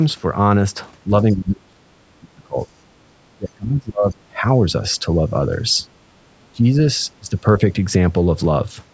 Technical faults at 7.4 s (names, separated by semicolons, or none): speech suppressed in double talk